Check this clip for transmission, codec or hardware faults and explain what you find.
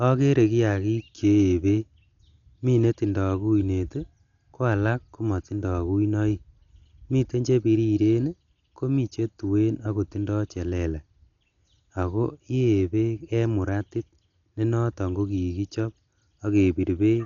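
One codec fault runs through the whole speech clip: heavy Dolby Digital compression, likely from a low-bitrate encode around 48 kbps. Throughout, the band is cut off with nothing above 7 kHz, and unfunded frequency lines are filled with dither noise, giving dull speech with rough, fluttering grain. A spectrogram shows a hard ceiling at 7 kHz and speckled noise between harmonics.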